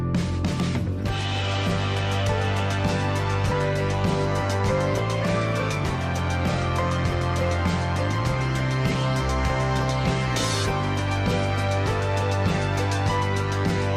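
No technical faults are audible.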